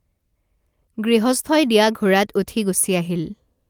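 No technical faults are audible anywhere in this speech recording.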